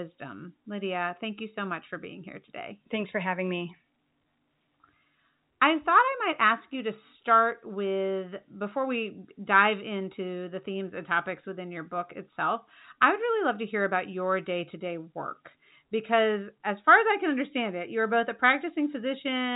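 Speech heard through G.711 telephone coding, with nothing above about 3.8 kHz, and no technical fault to report.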